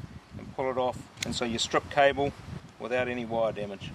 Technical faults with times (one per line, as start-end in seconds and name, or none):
1.21-2.60 sudden gain jump